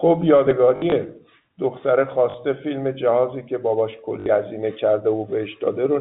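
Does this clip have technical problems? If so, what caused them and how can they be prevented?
Yes. The network dropped packets and the receiver filled each gap by replaying the last one it had, which is packet loss with last packet repeated. It occurs at 0.76 to 0.92 s, where 80 ms went missing in scattered bursts of up to 60 ms, and again at 2.30 to 2.34 s and 4.20 to 4.26 s. The repeats don't line up with the pitch, and the longer runs buzz at about 50 Hz, which fits 20 ms packets and sounds like a short robotic stutter. It can be prevented with a more reliable network path, a deeper jitter buffer, and concealment that smoothly extends the signal instead of copying packets.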